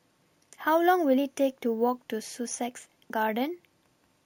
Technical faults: imaging from sample-and-hold upsampling

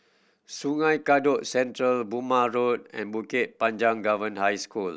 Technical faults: none

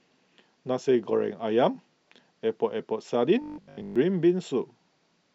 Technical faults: robotic sound from repeated short buffers

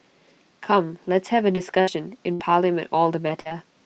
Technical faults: repeated packet loss (robotic sound)

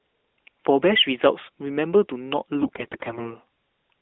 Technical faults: AMR bit errors

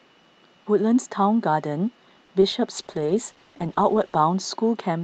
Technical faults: short stall from a late packet; short concealed packet loss; call bitrate drop

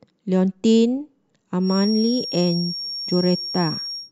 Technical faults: feedback whistle

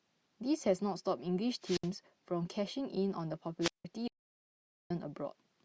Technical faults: wireless microphone squelch dropout; audio dropout to silence

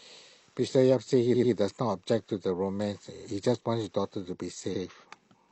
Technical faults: repeated frames

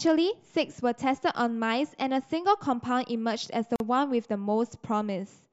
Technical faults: gap at a join of encoded pieces

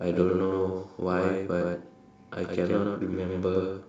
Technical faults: doubled audio track

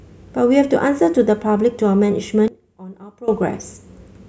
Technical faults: one channel inverted

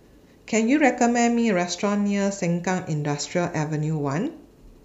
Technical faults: none

